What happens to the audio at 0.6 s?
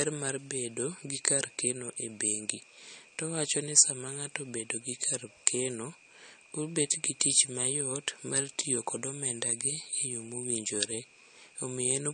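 At 0.6 s the speech carries the same damage heard through the whole clip, likely from MP3 compression at a low bitrate around 40 kbps. Nothing is left above 9.1 kHz. Starved of bits, the encoder drops weak frequency lines frame to frame. The speech sounds dull, watery and swirly.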